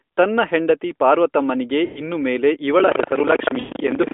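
Speech carried over an AMR narrowband mobile codec, band-limited to roughly 250 Hz to 3.5 kHz with only light coding colour, consistent with the 12.2 kbps mode. Lost AMR speech frames occur twice. From 1.86 to 2.02 s, after "ತನ್ನ ಹೆಂಡತಿ ಪಾರ್ವತಮ್ಮನಿಗೆ" and before "ಇನ್ನು ಮೇಲೆ", about 100 ms of sound is smeared and fading, which fits five consecutive 20 ms frames failing their check and the decoder extending the last good parameters at falling gain. A second, 120 ms run at 3.60 to 3.72 s behaves the same way and fits six frames. Buffer tearing starts at 2.76 s, after "ಹೆಂಡತಿ ಪಾರ್ವತಮ್ಮನಿಗೆ ಇನ್ನು ಮೇಲೆ", and lasts to the end. It is a 25 Hz robotic rattle heard only while sound is present. The writer and reader of the playback ring buffer have drifted so that they cross every period, leaving roughly a fifth of each buffer filled with audio from about 150 ms earlier, bounded by hard joins.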